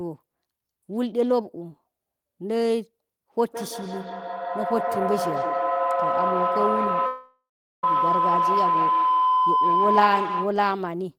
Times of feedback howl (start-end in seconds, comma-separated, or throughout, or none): 3.44-10.70